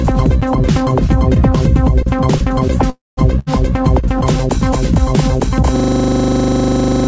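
A recording of everyday sounds, heard through a call path that leaves nothing above 8 kHz. From 2.90 to 3.19 s the sound trails off and goes silent for about 0.19 s, then resumes intact. A likely call audio freeze put in a 0.27 s gap. At 3.39 s a burst of packet loss brings a short fading fill and cuts about 60 ms of sound. From 5.76 s to the end, a system hang loop repeats one 40 ms piece as a steady 25 Hz buzz.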